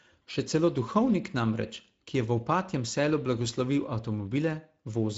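The speech has passed through the Speex codec at a setting low enough that its CELP coder runs short of bits for the excitation, which fits a rate near 17 kbps. The damage is plainly audible throughout: hoarse, noisy speech, with nothing above 7.7 kHz.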